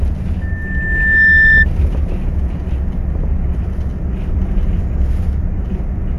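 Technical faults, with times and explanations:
0.41 to 1.66 s, loudspeaker feedback squeal. A single tone near 1.8 kHz rises out of the sound and swells into a piercing squeal. It takes well under a second to reach full strength, then sits roughly 10 dB above the surrounding audio before stopping. A microphone was picking up its own loudspeaker. At this one frequency the loop gain went past unity. Each trip round the loop made the tone louder.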